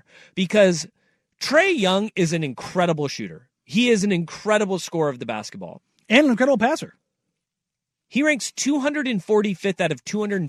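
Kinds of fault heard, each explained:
No technical fault can be heard anywhere in the speech. There is nothing to list under any kind.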